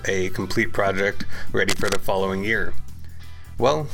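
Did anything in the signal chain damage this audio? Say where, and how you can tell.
Yes, at the analogue wiring stage. From 1.69 to 1.96 s a dense, uneven burst of scratchy noise sits over the sound, only somewhat quieter than it. This is cable scratch noise. A worn cable or connector likely shifted, making its contact resistance flicker rapidly.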